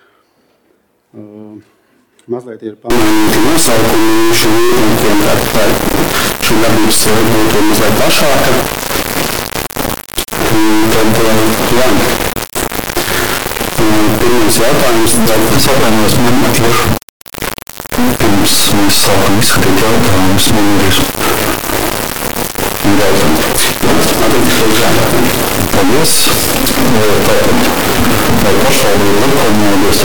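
From 2.90 s to the end, integer read as float: 32-bit integer samples decoded as float become near-zero or huge values, producing a harsh clipped square-wave buzz. The waveform slams between the clipping limit and silence, and the spectrogram shows dense broadband harmonics.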